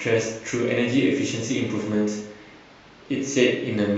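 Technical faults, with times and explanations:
No technical faults can be heard in the speech. There is nothing to time or explain.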